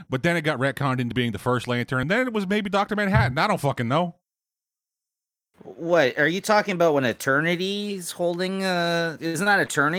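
At 1.12 s, right after "it got retconned into", there's a small jump, about 20 ms gone. Again at 2.03 s before "and then it was", roughly 10 ms, likely a dropped buffer (overrun) splicing the audio straight across.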